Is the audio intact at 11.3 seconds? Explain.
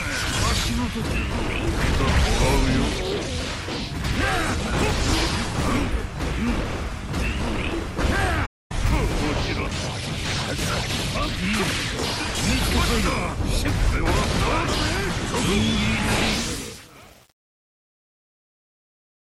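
Yes, the audio at 11.3 seconds is intact, with no fault heard at that moment.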